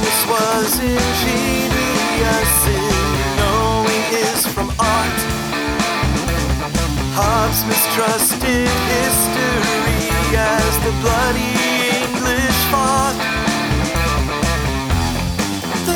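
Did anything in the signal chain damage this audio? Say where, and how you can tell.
No, nothing in the signal chain stood out as having damaged this audio on listening.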